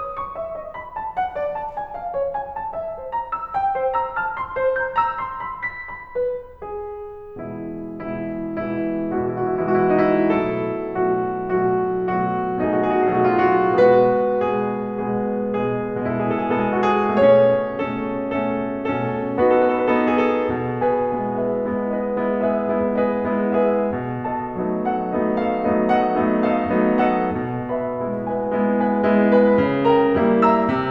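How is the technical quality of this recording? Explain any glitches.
Nothing in this music recording gives me any glitch to point to, so there's no fault to explain here.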